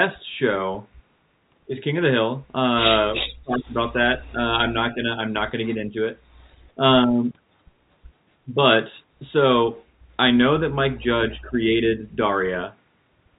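At 3.14–3.22 s an echo leak appears: a delayed copy of the speech arriving 361 ms late at about 10 dB below it, likely from a far-end loudspeaker whose echo canceller missed part of the pickup. More scraps follow at 4.26–4.30 s (about 40 dB down), then at 5.64–5.76 s and 6.48–6.55 s with a 233 ms delay, about 25 and 35 dB down. On a spectrogram they show as ghostly repeats of earlier harmonic patterns. From 3.2 to 5.07 s the speech is suppressed in double talk, probably because the canceller cannot separate the talker from the echo. The waveform collapses in pieces totalling roughly a second, dropping as much as 40 dB. A milder dip of about 10 dB follows at 11.39–11.57 s. Throughout, the G.711 telephone coding keeps everything below 4 kHz.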